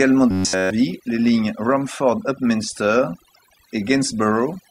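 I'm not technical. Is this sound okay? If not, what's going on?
No. A noise-reduction tool was set far too strong across the whole recording. This is overdone noise removal: it silences any sound resembling background hiss, including quieter parts of the speech. The background drops away and breaks up into twinkling specks.

From 0.31 to 0.70 s, the playback software was likely receiving new audio too slowly and filled the gaps by replaying one tiny slice, roughly a hundredth of a second long, over and over. This robotic sound from repeated short buffers turns that whole stretch into a rigid, metallic buzz pitched around 94 Hz.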